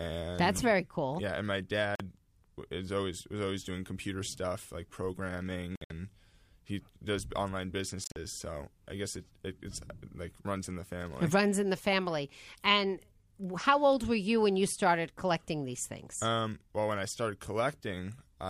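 Audio packets likely missed their deadline to the headphones, a Bluetooth dropout: the speech cuts to silence and resumes further on, as if it had played through. There is a 44 ms hole at 1.95 s, then broken gaps at 5.76 to 5.90 s (116 ms lost, longest 58 ms) and 8.04 to 8.16 s (87 ms lost, longest 44 ms).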